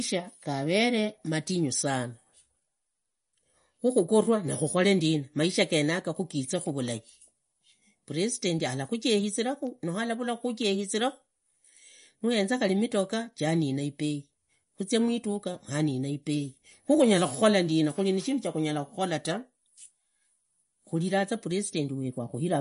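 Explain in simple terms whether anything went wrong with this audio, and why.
Something did go wrong, and it runs the whole way through the speech: it sounds like heavy MP3 compression, most likely squeezed hard to save space. Nothing comes through above about 10.6 kHz, so the crisp top end is simply gone and everything sounds a bit dull. With so little room to work with, the encoder keeps dropping quieter detail and bringing it back from moment to moment, which gives that watery, swirly edge.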